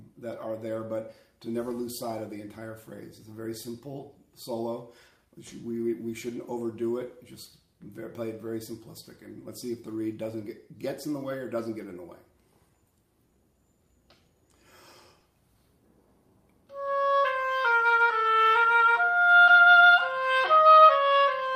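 Clock drift between sender and receiver runs through the whole clip. The sender's clock is roughly 1.5 percent slow, so the receiver keeps running short of audio.

From 0.48 to 13.38 s, repeated timing corrections stretch the sound. Short pieces are repeated, adding about 200 ms. Playback runs near 99 percent speed.

From 15.20 to 15.24 s, there is a short stall from a late packet. The buffer ran empty. The last sound is held 20 ms, with nothing lost.

From 16.30 to 20.76 s, repeated timing corrections return. They add about 70 ms at near 98 percent speed.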